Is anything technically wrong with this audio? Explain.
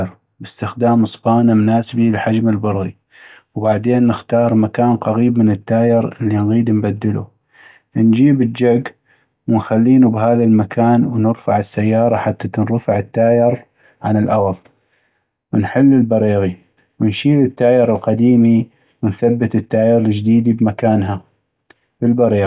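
No, nothing in this speech recording stands out as a technical fault. There is nothing here that calls for a time or a fix.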